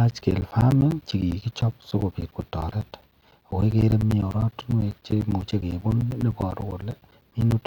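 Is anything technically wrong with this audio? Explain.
Yes. From 0.11 to 7.62 s, periodic USB or driver dropouts blank roughly 10 ms every 0.1 s with silence, about seventy losses heard as regular ticks through the speech.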